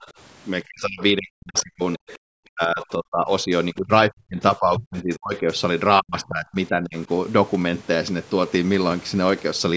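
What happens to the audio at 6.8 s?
At 6.8 s the speech is partway through a stretch of speech suppressed in double talk, running from 6.0 to 7.09 s. The voice sinks by as much as about 25 dB and breaks into pieces for around 0.7 s in total, most likely because an echo canceller mistook it for loudspeaker echo while the far end was talking and turned it down. Unlike a network dropout, the level ducks unevenly instead of snapping to silence.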